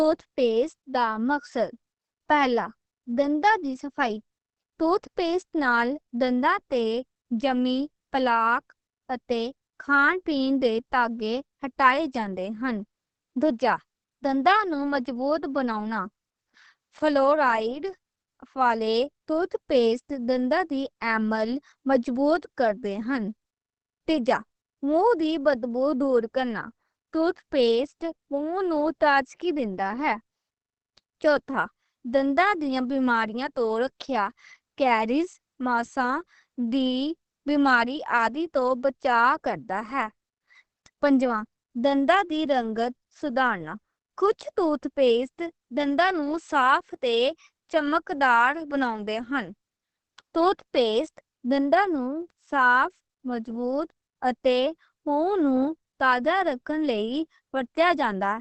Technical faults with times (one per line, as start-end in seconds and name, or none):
0.00-58.41 Opus compression